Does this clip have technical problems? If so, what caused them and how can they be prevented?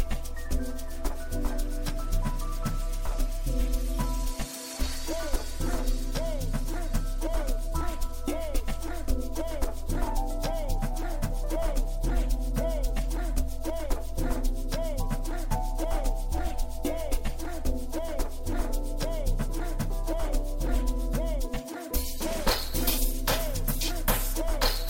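No, this clip has no technical problems, so there is nothing to trace to a cause or prevent.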